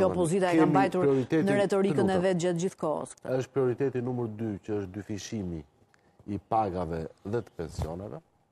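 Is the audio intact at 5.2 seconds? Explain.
Yes, the audio is intact at 5.2 seconds, with no dropout, click, distortion or other fault to be heard at that moment.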